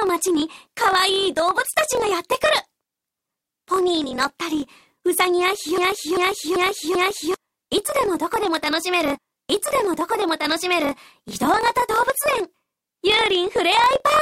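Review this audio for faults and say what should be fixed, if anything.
A low buzz at about 43.1 Hz runs under the whole clip, and everything plays roughly 1.12 times too fast while keeping close to its normal pitch. This is a block size mismatch (truncated). One stage writes blocks longer than the next stage reads, which fits a 1024-sample read, so the tail of every block is discarded. The buzz comes from those regular cuts. Set both stages to the same block size, or buffer the surplus instead of dropping it.

From 5.78 s to 7.34 s a 0.44 s fragment repeats exactly, back to back, four times, like a stuck record. This broken-record loop likely comes from the player, encoder or stream stalling and resending the last fragment it held. Whatever should have played during that stretch is missing. Handle stalls by inserting silence or resynchronising rather than replaying buffered audio.

Between 9.17 s and 10.94 s the audio jumps back with a small blip and replays material already heard, adding about 2.0 s. 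This is a stream segment repeated: the same segment was fetched or queued twice, so that stretch of the programme runs again. Track segment sequence numbers or timestamps and drop any segment that has already been played.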